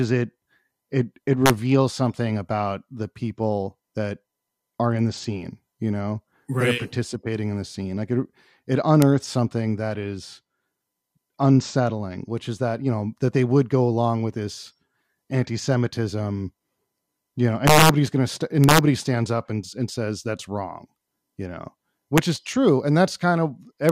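Integer overflow cracks the speech at 1.46–1.50, 9.02, 17.67–17.89, 18.64–18.79, 22.18 and 23.89 s, where peaks exceed the limit by about 0 to 4 dB and wrap to the opposite sign. Unlike clipping's flattened buzz, each is a violent snap.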